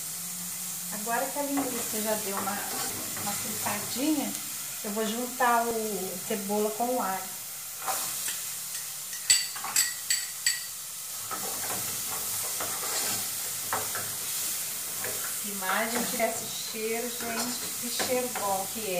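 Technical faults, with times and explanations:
2.90–2.93 s and 16.19–16.23 s, damaged data in a compressed stream: Each event is a disruption lasting about 30 ms where part of the encoded stream was corrupted. The decoder could not read the frames in that stretch, lost its sync and had to search for the next valid frame header before output resumed. The break comes from that misread and resynchronisation, so the sound is interrupted at that point rather than simply getting quieter or duller.
5.71 s, audio missing between chunks: The sound is cut off at this instant and picks up again with no gap. It is a single event, and the piece lost is roughly 20 ms. The likely cause is a recorder or processor working in chunks of about 6 s that dropped a short stretch while closing one chunk and opening the next, then joined the two sides directly.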